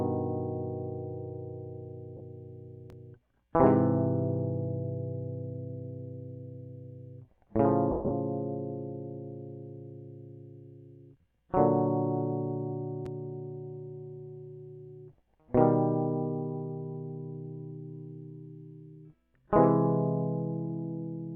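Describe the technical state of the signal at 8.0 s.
Lost LE Audio frames from 7.91 to 8.11 s, 170 ms in all: the decoder repeated the last spectrum with random signs, smearing the music into fading noise.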